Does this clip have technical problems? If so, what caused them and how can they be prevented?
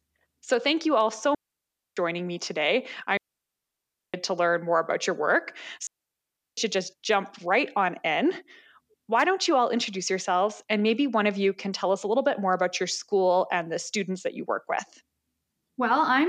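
Yes. The speech has three digital wireless dropouts: at 1.35–1.97 s after "thank you all so", at 3.17–4.14 s after "me today", and at 5.87–6.57 s after "more about your work". Each is a clean mute of about 0.62 s, 0.97 s and 0.71 s, with no noise burst, because the receiver silences its output when the link loses too much data. Keeping transmitter and receiver in line of sight at short range, away from interfering RF, prevents this.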